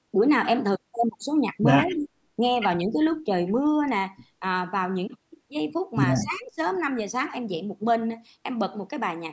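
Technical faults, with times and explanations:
1.87–1.97 s, echo leak: a faint copy of the speech trails about 200 ms behind, around 30 dB down, likely the far end's echo canceller letting its loudspeaker pickup through.
1.92–2.09 s, 2.86–2.99 s, 6.22–6.6 s, speech suppressed in double talk: the speech dips by about 5, 10, then 20 dB, likely an echo canceller turning everything down while both sides talk.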